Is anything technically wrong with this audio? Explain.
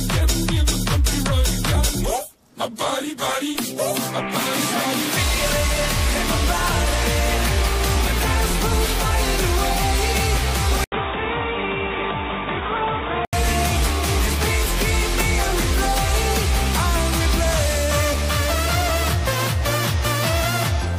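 Yes. From 10.84 to 13.33 s the sound drops out for about 80 ms, then returns dull and boxy with nothing above 3.8 kHz, roughly 5 dB quieter, over a faint new background hiss. This is likely an input switched to a poorer device. Unlike a simple filter change, it brings a switching gap and its own noise floor.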